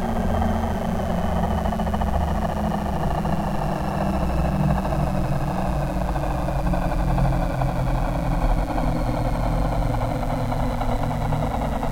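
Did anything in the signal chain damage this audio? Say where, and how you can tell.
Yes. Mains buzz runs through the whole clip in the analogue wiring: a steady, raspy buzz sits roughly 25 dB below the sound. Switching spikes from a dimmer, rectifier or missing shield enter twice per 60 Hz cycle, spraying harmonics up to several kHz.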